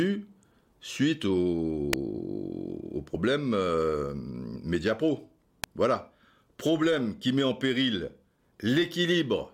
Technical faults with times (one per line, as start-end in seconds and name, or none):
1.93 electrical switching spike
3.13 damaged data in a compressed stream
5.64 electrical switching spike